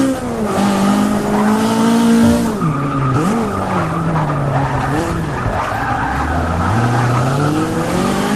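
No technical faults can be heard anywhere in the audio.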